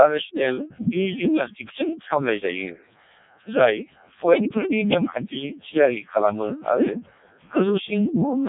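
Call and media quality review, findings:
Robotic, buzzy speech throughout, nothing above 3.7 kHz. Codec 2 vocoder at 0.7 kbit/s, heavy damage: only pitch, voicing, energy and spectral envelope transmitted, decoder resynthesises from sine waves, original waveform lost, so natural texture is replaced by synthetic buzz.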